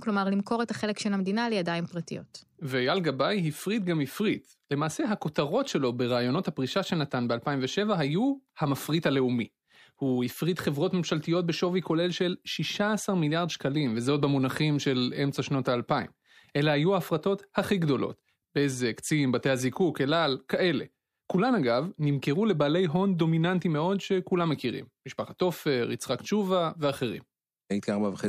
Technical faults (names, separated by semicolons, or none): none